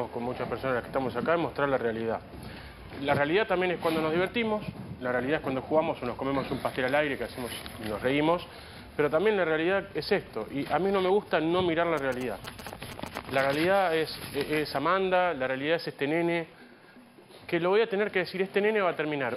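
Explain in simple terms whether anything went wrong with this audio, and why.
GSM signalling bursts interrupt the sound from about 11.98 to 13.55 seconds, a galloping dit-dit-dit of short buzzes sitting not far below the main sound. A nearby 2G mobile phone was exchanging brief signalling messages with the network, as happens just before a call or text arrives. The recording circuit picked up those radio pulses and turned them into audible sound, which is why each buzz is made of pulses repeating about 217 times per second.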